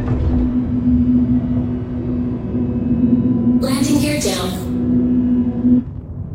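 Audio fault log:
No faults found; nothing audible in the clip warrants an entry.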